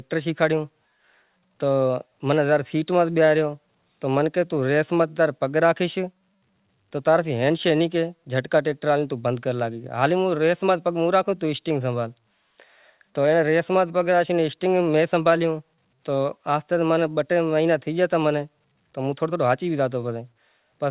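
Nothing in this speech recording points to a technical fault. It carries the narrow sound of G.711 A-law telephone coding at 8 kHz sampling, with nothing above 4 kHz and a faint noise that rises and falls with the level, which is how that format normally sounds.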